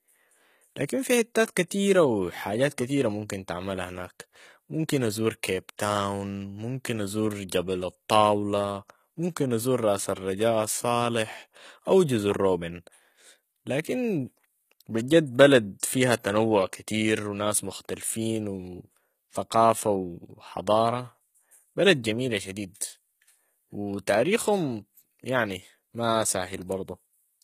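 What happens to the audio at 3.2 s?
At 3.2 s you're hearing the same thing that runs through the whole clip: the speech sounds like HE-AAC compression, likely at a very low rate, which fits something around 20 kbps. Only the lower band is really coded; the treble is patched in by copying lower bands upward under a coarse envelope, so the top end reaches higher but is not genuine. The damage is plainly audible: s sounds come out gritty and lispy, and nothing exists above about 14.9 kHz.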